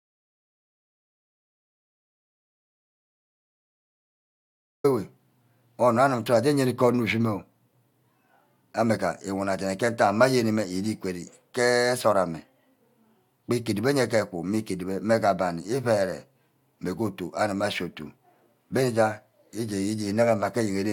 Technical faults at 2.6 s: audio dropout to silence

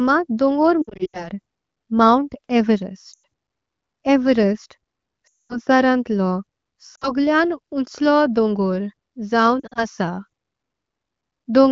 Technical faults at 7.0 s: lost AMR speech frames

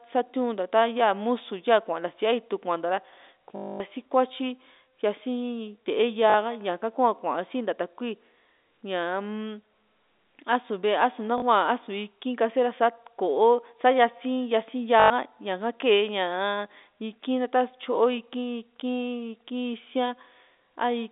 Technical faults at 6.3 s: packet loss with last packet repeated

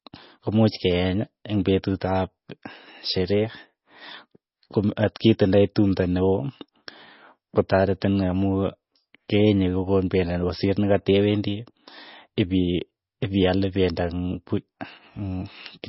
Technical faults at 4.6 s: MP3 compression

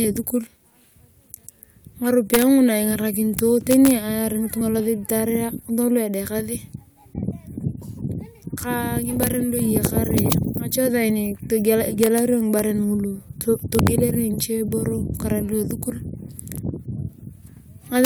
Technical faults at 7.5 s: none

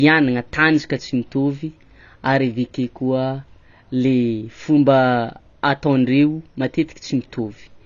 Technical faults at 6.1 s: AAC compression

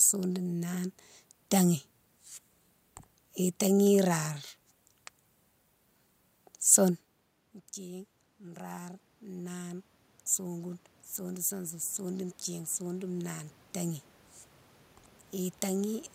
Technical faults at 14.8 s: none

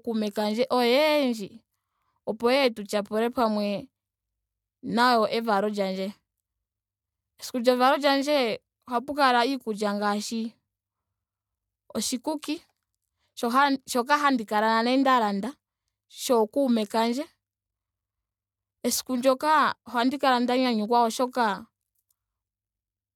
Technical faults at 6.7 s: none

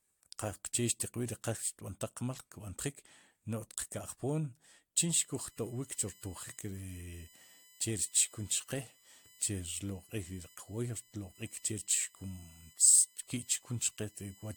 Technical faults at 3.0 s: generation loss

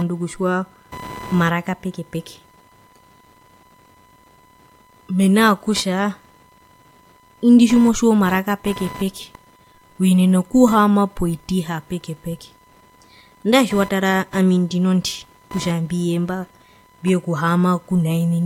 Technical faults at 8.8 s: computer activity noise; low bit depth without dither

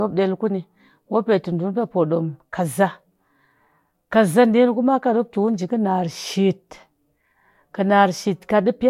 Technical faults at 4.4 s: none

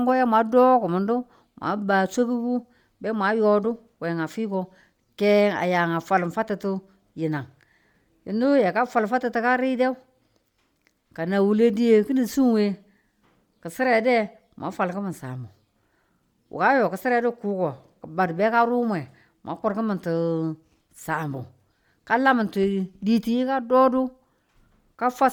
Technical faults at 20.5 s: Bluetooth LC3 compression

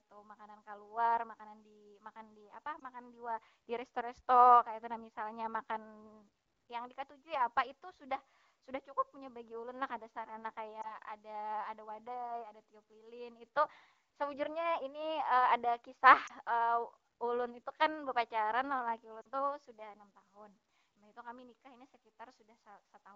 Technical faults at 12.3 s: none

